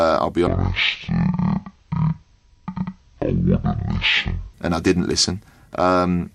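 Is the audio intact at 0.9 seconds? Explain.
No. From 0.47 to 4.54 s, right after "I'll be", stereo read as mono plays the interleaved samples as one channel, so it's half speed and an octave down.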